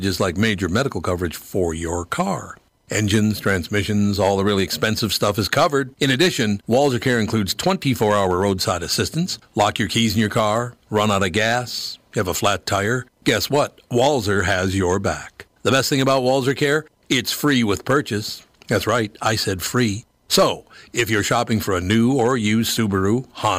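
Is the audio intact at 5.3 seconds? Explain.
No, the speech is hard clipped there and throughout: it's driven about 9 dB past full scale, so louder peaks get sheared flat and crackle harshly.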